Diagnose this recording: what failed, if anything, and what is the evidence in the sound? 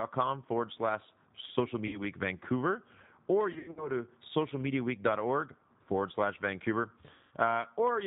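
The codec stage shows G.729 compression at 8 kbit/s, plainly audible across the whole clip. Nothing above 4 kHz survives, so the speech is dull and band-limited, with a rough, slightly synthetic texture. The decoder rebuilds each 10 ms frame from a vocal-tract filter, a pitch predictor and a few pulses rather than carrying the waveform itself. The sparse pulse excitation is what gives the voice that buzzy, processed edge.

The network stage shows VoIP packet loss concealed by the speech codec at three points. Just after "forward slash social", around 1.87 to 2.01 s, about 60 ms of audio is missing, which fits two 30 ms packets. From 3.53 to 3.90 s, losses totalling about 180 ms are scattered over 240 ms, with the longest gap 90 ms. From 7.13 to 7.33 s, another 180 ms is lost. In each gap the decoder stretches its last pitch and filter into a fading buzzy tone or coloured noise, and the speech stays weak and smeared for a while after packets resume.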